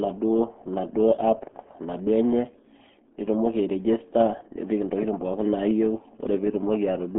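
Throughout the speech, the RealAudio 14.4 codec squeezes the sound into a telephone-like band of roughly 200 Hz to 3.4 kHz, leaving it muffled and gargly. The heavy coding damage points to an 8 kbit/s stream. On a spectrogram, everything above 3.8 kHz is empty.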